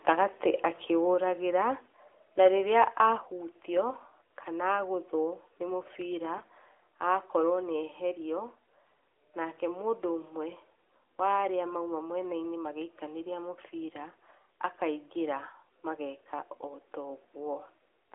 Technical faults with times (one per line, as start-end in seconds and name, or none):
3.18 microphone volume stepped down
8.85-8.94 AMR bit errors